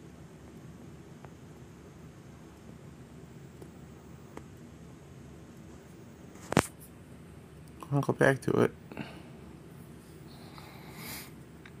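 Nothing stood out as a technical fault when listening to the audio.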